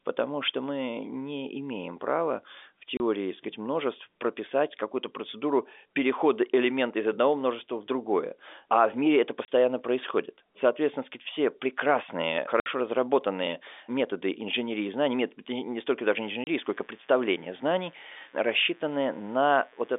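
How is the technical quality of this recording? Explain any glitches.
The recording has two problems: a few short dropouts, and a buzz that creeps in near the end. It's a telephone-band line, with nothing audible above roughly 3.6 kHz.

Packet loss filled with silence: holes at 2.97 s, 9.45 s, 12.6 s and 16.44 s. Each gap is 30 ms except the one at 12.6 s, which is 60 ms. That fits a 30 ms packet size, with two packets lost in a row at 12.6 s. The receiver dropped in silence rather than concealing the loss, so each gap cuts off abruptly with hard edges.

Mains buzz: from about 16.0 s to the end there's a steady, raspy buzz on a 60 Hz mains supply, sitting around 35 dB under the speech. Something like a dimmer or a poorly shielded rectifier is injecting sharp switching spikes twice per cycle, and their harmonics spread well up into the audible range.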